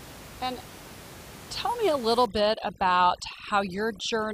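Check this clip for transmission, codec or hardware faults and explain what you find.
One fault is audible, over steady room noise about 18 dB below the speech. From 2.26 s to the end, overdone noise removal strips frequency bands near the noise floor. Background collapses into twinkling specks; unlike a noise gate, the floor breaks up band by band rather than cutting out whole.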